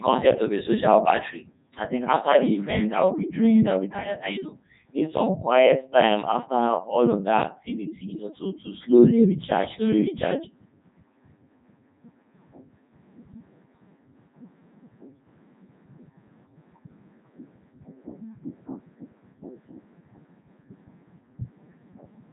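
From start to finish the speech has that robotic, buzzy Codec 2 vocoder character, and the damage is heavy. The decoder never keeps the real waveform. It rebuilds each stretch of voice from sine waves driven by pitch, voicing, energy and a rough spectral envelope, so everything sounds synthetic. Nothing comes through above 3.8 kHz, and the codec is running in its top 3.2 kbit/s mode.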